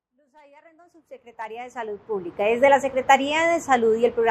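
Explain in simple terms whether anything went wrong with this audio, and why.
Nothing went wrong: the sound rises gently from silence at the very start and reaches full level at about 2.59 s, which is an ordinary editor's fade-in with no click or sudden jump.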